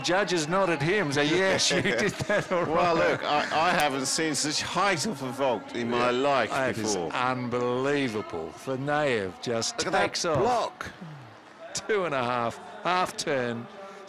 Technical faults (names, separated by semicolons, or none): none